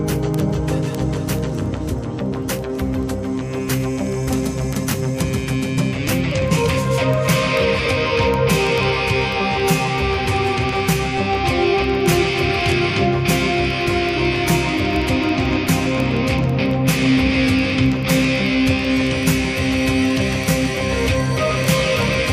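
From 0.13 s to 22.30 s, word clock ticks recur roughly every 50 ms, hundreds of sharp clicks of uneven strength. An unlocked receiving clock, a few hundred parts per million off, drops or repeats one sample each slip, showing as evenly spaced thin vertical spectrogram lines and single-sample waveform steps.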